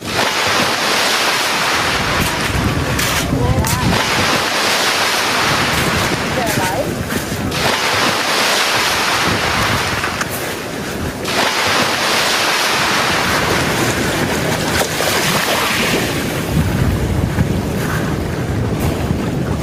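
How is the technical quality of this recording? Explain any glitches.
The recording is marred by gain pumping that runs from start to finish. The likely cause is input gain set far too high for the microphone, with a fast limiter or compressor clamping the level down each time a loud sound arrives and letting it spring back up afterwards. The result is a swing of roughly 15 dB: loud and quiet parts sit unnaturally close together and the whole sound feels squashed.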